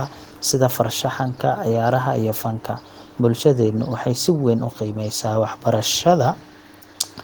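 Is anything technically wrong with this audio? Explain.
No technical faults are present.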